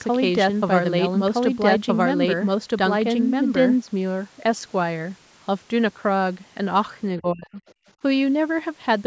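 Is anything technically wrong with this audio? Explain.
Yes, there are three problems.

From the very start until 3.76 s, a doubled audio track is audible: a second full-band copy, about as loud as the original, trails it by roughly a second and a half. It is likely from a slower capture path or an out-of-step edit. A waveform shows repeated envelopes offset by that gap, and the copy stops abruptly with no decay.

Between 7.19 and 7.61 s, the speech is suppressed in double talk. The talker's level falls sharply, by around 30 dB at its deepest, over almost half a second. The echo canceller likely pulled down both voices at once. A waveform shows a collapsed envelope.

From 7.67 to 7.91 s, the other side's voice leaks through. It is a brief scrap of a second voice, very faint, roughly 35 dB under the talker. The likely cause is loudspeaker sound the echo canceller failed to remove. A spectrogram shows weak harmonic traces within the band, which ends at 8 kHz.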